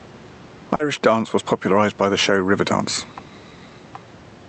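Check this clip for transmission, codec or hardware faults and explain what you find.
Two faults stand out: level pumping across the whole clip, and one brief dropout patched over by the receiver.

Gain pumping runs throughout. The gain ducks by roughly 10 dB under each loud syllable, likely from an overdriven input pulled back by a fast limiter. On the waveform the envelope looks flattened, with the noise floor rising and falling between phrases.

Short concealed packet loss occurs from 0.75 to 0.82 s, just before "stepdance was popularized by". About 40 ms of audio never arrived, so the decoder extended the preceding sound and crossfaded back, producing a brief smear. A spectrogram shows a smoothed stretch with blurred edges there.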